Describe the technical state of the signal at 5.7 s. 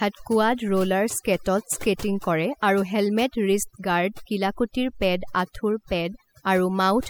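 At 5.7 s the speech sits over a lowered background broken into twinkling specks: overdone noise removal, present throughout, cutting any frequency band near its noise estimate.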